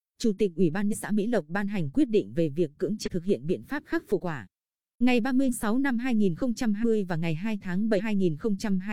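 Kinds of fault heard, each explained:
Compressed frames skipped: dropped coded frames make the speech jump ahead six times, losing roughly a fifth to a third of a second.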